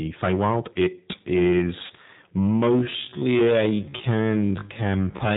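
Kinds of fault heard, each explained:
Hard clipping: The level is pushed about 13 dB beyond what the chain can pass, so the peaks are sliced flat on around 7 percent of the samples. Because the overload is this heavy, the loud parts of the speech carry a constant harsh fuzz rather than an occasional crackle. The flattened tops add harmonics high in the spectrum. That separates it from the codec's roughness, which shows even in quiet syllables.
G.729 codec: The speech is rebuilt from a vocal tract filter, a pitch predictor and a few pulses per frame, and nothing above 4 kHz survives. The result is narrow, slightly synthetic and rough throughout, with plainly audible damage that fits G.729A at 8 kbit/s. Unlike clipping, this coloration does not depend on loudness. It sits on every sound, and any background noise picks up a watery warble.
VoIP packet loss concealed by the speech codec: From 1.86 to 1.92 s, the decoder has nothing to decode and stretches its last pitch and filter settings. 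The sound briefly turns into a buzzy tone or coloured noise, sagging in level instead of dropping to silence. The gap lasts about 40 ms, which fits two lost 20 ms packets. Because each frame builds on the one before, the voice stays weak and smeared for a moment after audio returns.
Time-stretched section: From 2.37 s to the end, the pace drops abruptly to about 0.56 times the original, yet the pitch does not fall. The slowed speech drags, as short pieces are repeated to fill the extra length. This is likely software stretching the audio to fit a duration. A tape-style slowdown would also lower the pitch, which clearly does not happen here.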